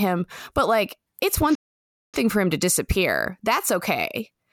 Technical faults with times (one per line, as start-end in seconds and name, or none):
1.55-2.14 playback stall